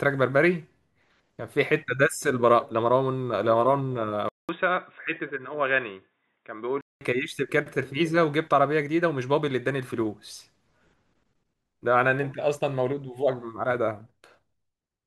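From 4.29 to 7.01 s the input likely switched to a poorer device. A 200 ms silence marks the change, then the speech loses everything above 3.8 kHz and turns dull and boxy. It drops about 5 dB in level and carries faint new background noise.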